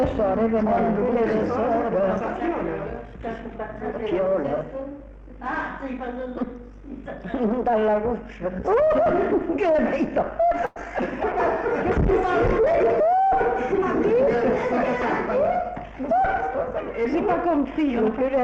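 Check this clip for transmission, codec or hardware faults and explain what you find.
Two things stand out, both typical of a call path.

From 10.65 to 10.78 s there's a call audio freeze. For about a tenth of a second the last bit of sound is stretched into a brief buzzy tail instead of dropping out. The likely cause is packets stalling in transit and the jitter buffer running dry. The receiver filled the wait, and when the packets caught up the audio picked up where it stopped. Nothing's lost, but everything after lands about 104 ms later.

Then from 11.32 to 15.79 s there's a call bitrate drop. The encoder gets squeezed from 64 kbps down to 22 kbps and sits at that floor for roughly three and a half seconds. At that rate Opus quantises much more coarsely and narrows the band, with the top end falling from 20 kHz to 12 kHz. So you hear the sound go duller and rough and watery, then open back up as the rate recovers.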